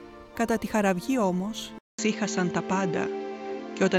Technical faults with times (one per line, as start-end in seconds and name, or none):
1.79-3.99 input switched to a poorer device